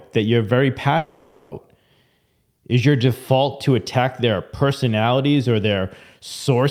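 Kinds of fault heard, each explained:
long network dropout: just after "that you're very", 0.97 to 1.53 s turns into a fading buzz or hiss, likely from lost packets, and that speech never returns.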